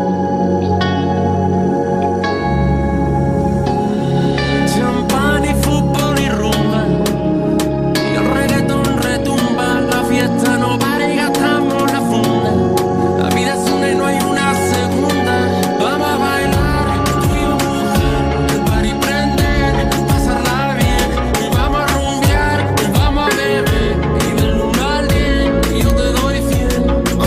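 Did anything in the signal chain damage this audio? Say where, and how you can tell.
Yes. Seven violent, instantaneous cracks sit on loud peaks at 5.63, 10.21, 12.77, 14.20, 15.63, 22.27 and 25.90 s. They are far harsher than ordinary clipping distortion. This is integer overflow in a fixed-point gain or sample-format conversion stage. Peaks reaching only full scale, with essentially no overdrive, wrapped past the largest integer to the opposite sign instead of being limited. Each one became a full-range jump.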